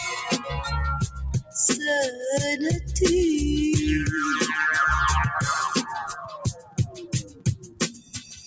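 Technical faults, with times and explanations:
Throughout: noise suppressor applied to music or sounds. A speech-tuned suppressor is running over the whole clip, treating anything steady as noise. Level swings by roughly 10 dB as it clamps down and lets go, so the sound pumps and thins, with sustained parts and decays sinking while sharper onsets punch through. With the call path's band limit, nothing is heard above 8 kHz, which belongs to the call processing, not this fault.
1.38–1.55 s and 6.15 s to the end: sound cut by the noise suppressor. In both spots the suppressor decides the sound is noise and pulls it down hard, dropping about 16 dB at its deepest. The first is a brief dip, well under a quarter second. The second is much longer, covering most of the last couple of seconds, where tails and held sound get choked off instead of fading naturally.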